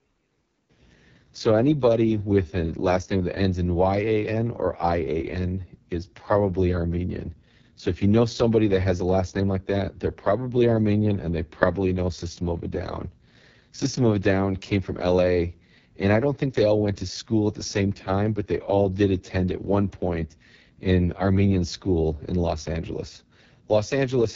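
From start to finish, the speech carries AMR wideband (HD Voice) codec damage, and it is heavy. The voice sounds rough and raspy, which fits the lowest 6.6 kbit/s mode. Nothing is present above 7.2 kHz. The upper frequencies from 6.4 to 7 kHz are filled with shaped noise.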